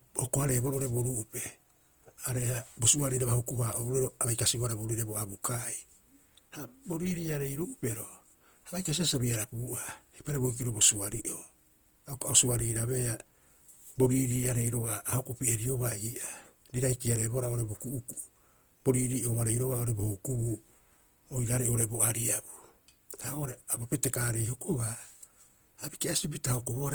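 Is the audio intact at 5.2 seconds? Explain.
No. At 5.2 seconds the speech carries Opus compression damage, present through the whole clip. It sounds rough, grainy and noisy rather than swirly, with the full bandwidth kept. The likely cause is Opus music mode filling starved bands with noise, which fits a low bitrate around 24 kbps.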